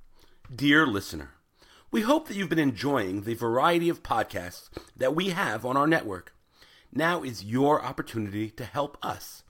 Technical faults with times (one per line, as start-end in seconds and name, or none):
none